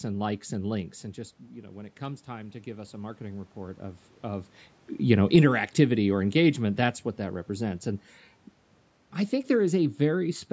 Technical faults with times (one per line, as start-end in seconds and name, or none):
1.55-4.56 automatic gain rising